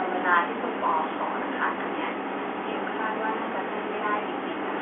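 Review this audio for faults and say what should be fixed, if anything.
Nothing to fix: the speech carries the narrow band expected of G.711 telephone coding, roughly 300 Hz to 3.4 kHz, with no fault audible anywhere in the clip.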